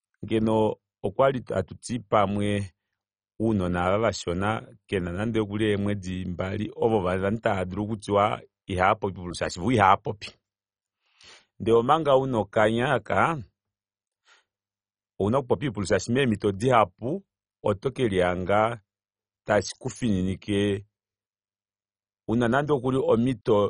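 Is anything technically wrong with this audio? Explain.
Yes. MP2 compression affects the whole clip: the speech sounds dull and carries a gurgling, granular distortion, with nothing above 10.4 kHz. This is likely caused by MPEG Layer II coding starved of bits. The coder splits the signal into 32 sub-bands and, short of bits, shuts off the upper ones and quantises the rest coarsely, so bands flicker in and out. The heavy damage points to a very low bitrate, around 32 kbps.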